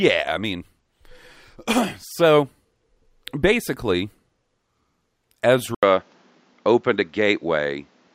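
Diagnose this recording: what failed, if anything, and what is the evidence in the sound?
At 5.75 s the speech drops out for 80 ms. From there to the end, nothing remains above 7.6 kHz, so it sounds duller. A new, faint background noise appears. The level stays similar. Driver stage: the input likely switched to a poorer device.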